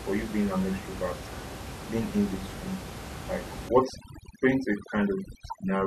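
From 3.69 s to the end at 5.86 s, overdone noise removal clamps down on the room noise, which sits only about 11 dB below the speech. Quiet bands vanish, leaving twinkling specks.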